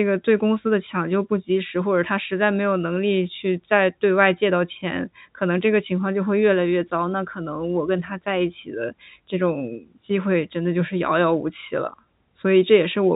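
No faults can be heard.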